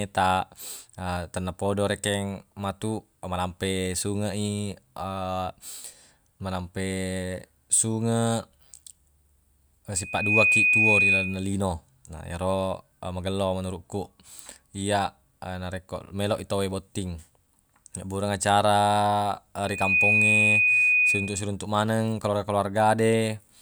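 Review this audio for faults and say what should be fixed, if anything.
Loudspeaker feedback squeal appears twice in this speech, from 9.95 to 11.51 s and from 19.62 to 21.52 s, each time a single 2.5 kHz tone. The microphone picks up its own loudspeaker, and at that frequency the loop gain tops one, so the tone feeds on itself. Unlike a steady interference whistle, it swells from nothing in under half a second, peaking about 10 dB above the speech the first time and about 5 dB the second. To prevent it, reduce gain, move the microphone out of the loudspeaker's coverage, or notch 2.5 kHz.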